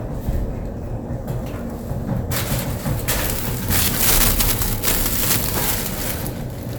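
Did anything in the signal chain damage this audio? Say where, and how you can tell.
Yes. At the sample-format conversion or gain stage, integer overflow from 3.1 s to 6.1 s: the level was pushed about 11 dB past full scale without limiting, so peaks wrapped to the opposite sign. Each loud moment becomes a violent crack, far harsher than clipping.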